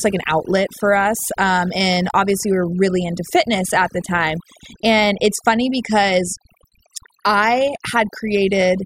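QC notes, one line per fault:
Throughout, overdone noise removal: the reduction is set so hard that quiet parts of the speech get gated with the noise, leaving speech over near-silence with twinkly specks.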